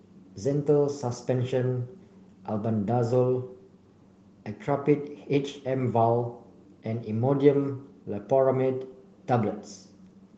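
No technical faults are present; the speech carries the light, full-band coding character of Opus voice compression in its hybrid mode, consistent with a rate of around 24 kbps.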